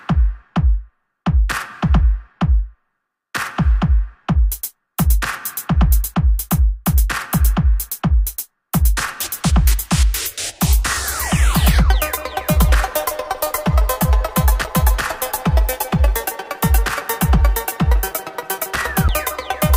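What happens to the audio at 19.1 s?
At 19.08 s the playback hits a CD skip. The player loses its place for an instant, as though the laser has been knocked onto another turn of the disc's spiral. It mutes very briefly, for only a few milliseconds, and then carries on from a different point. You hear a small tick followed by an abrupt jump in the sound, with no smooth join between before and after.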